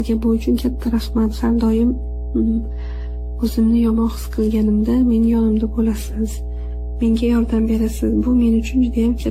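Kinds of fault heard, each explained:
Mains hum: A ground loop or a nearby transformer has let the 60 Hz power line leak into the recording path, so a steady low tone sits under the speech for the whole clip, with its low harmonics stacked above the fundamental. It is strong, only about 10 dB below the speech itself, so it never fades behind the talker and fills every pause with a constant buzz.
Generation loss: The audio was likely decoded and re-encoded around ten times through a lossy codec, each pass requantising on a shifted frame grid so the errors pile up. The speech sounds swirly, smeared and hollow, consonant attacks are blurred, and the spectrum stops dead at 16.6 kHz. The damage runs well beyond what a single pass would cause, which fits a repeated 64 kbit/s AAC-LC chain.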